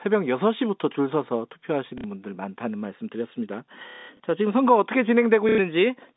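A brief robotic stutter interrupts the speech at 1.98–2.04 s, then a longer, choppier buzz runs from 3.9 to 4.2 s, and a third stutter appears at 5.49–5.58 s. This is packet loss with the last packet repeated: the receiver kept replaying the last audio it had until new data arrived. The lost stretches of 60, 210 and 90 ms fit 30 ms packets, so the buzz sits near 33 Hz. In the middle event, about 210 ms of audio is missing across 300 ms, with one run of about 180 ms.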